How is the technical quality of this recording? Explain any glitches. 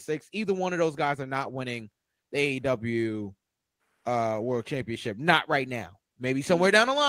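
No glitches are audible anywhere in the recording, so there is nothing to explain.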